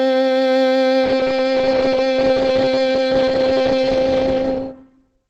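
At 1.04 s the music switches abruptly to an adaptive stream at a lower bitrate, with no gap. Treble vanishes above 9 kHz through the end, which fits a step down from about 64 to 16 kbit/s.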